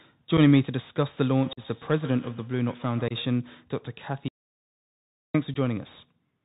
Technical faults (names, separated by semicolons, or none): Bluetooth CVSD headset codec; unconcealed Bluetooth headset packet loss; feedback echo between two devices; audio dropout to silence